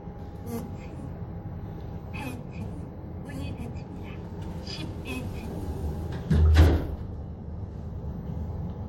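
No technical faults can be heard anywhere in this recording.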